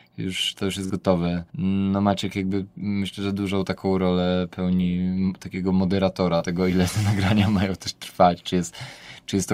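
Short concealed packet loss occurs twice in this speech, at 0.86–0.91 s and 6.38–6.45 s. Each time a few tens of milliseconds arrived too late, and the decoder extended the preceding sound to bridge the hole before rejoining real audio, leaving a brief smear or wobble.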